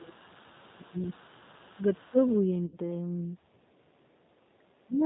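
The whole clip of speech is coded with G.729, the 8 kbit/s VoIP codec, and the damage is plainly audible. The codec rebuilds each 10 ms frame from a vocal tract model, a pitch predictor and a few pulses. That leaves the voice rough and slightly synthetic. Nothing above 4 kHz survives, so the top end is dull throughout. Whatever the call microphone processing let through higher up is gone.

From the start to 0.97 s the talker's voice sinks. The deepest dip is about 25 dB. This is speech suppressed in double talk, likely caused by an echo canceller that could not separate the local talker from the far side and turned everything down. The same thing recurs briefly, with shallower dips of about 20 dB at 1.75 to 1.84 s and about 15 dB at 2.1 to 2.29 s.

Underneath, the other side's voice is leaking through. A faint second voice appears from 0.06 to 0.37 s, about 35 dB down. It returns louder, about 30 dB below the talker, from 0.54 to 2.38 s. 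The likely cause is loudspeaker playback the echo canceller failed to remove from the microphone.

At 2.66 to 2.77 s there is VoIP packet loss concealed by the speech codec. About 60 ms of audio is missing, which fits three 20 ms packets. The decoder stretches the last sound into a buzzy tone or coloured noise that fades. The voice stays weak briefly after real audio resumes.

A very faint leak of the far voice returns from 3.53 to 4.47 s, about 40 dB down. Then from 4.48 s to the end, double-talk suppression strikes hardest. The talker drops by roughly 35 dB for about half a second.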